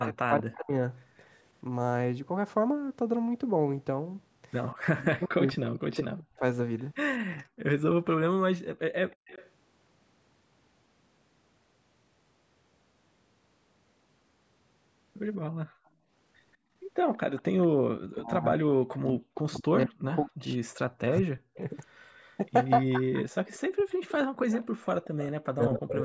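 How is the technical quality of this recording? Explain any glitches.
The recording has clear technical problems typical of a speakerphone call, with three recurring faults from imperfect echo cancellation. The audio stops at 8 kHz, which is consistent with call microphone processing.

Echo leak is heard from 0.0 to 1.24 s, 4.72 to 9.5 s and 15.33 to 25.79 s. A ghostly copy of the speech trails the original by 183 ms. It is strongest at the start, about 10 dB below the speech. In the middle stretch it is faint, around 25 dB down, and near the end it is around 20 dB down. The likely cause is a far-end loudspeaker whose sound reached its microphone and was not fully removed by the echo canceller, so it came back down the line.

Speech suppressed in double talk occurs from 0.04 to 0.75 s, 4.95 to 6.42 s and 18.12 s to the end. The speech dips sharply, at worst by around 40 dB. The affected time is under a second in the first span, about a second and a half in the second, and roughly four seconds in the last. 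This is likely because both sides spoke at once and the echo canceller, unable to separate the talker from the returning echo, turned everything down.

Background gated by the echo canceller appears at 7.44 to 7.59 s, 15.66 to 16.74 s and 24.27 to 24.39 s. The room sound drops out abruptly, by about 35 dB, 25 dB and 34 dB respectively. The first and last drops are very brief. The middle one lasts about half a second within that span. Each dip happens because the canceller clamped the microphone hard while the loudspeaker was playing, then released it and let the ambience return.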